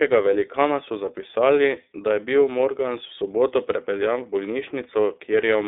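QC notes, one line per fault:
throughout, iLBC codec: the speech is confined to a telephone band of roughly 300 Hz to 3.6 kHz, with nothing above 3.7 kHz, and it carries a plainly audible rough, slightly synthetic texture. Each 30 ms block is coded on its own, which fits iLBC's 13.3 kbps mode. Unlike a simple band-limit filter, the roughness shows the excitation being rebuilt; unlike smeared transform codecs, there is no swirl or pre-echo.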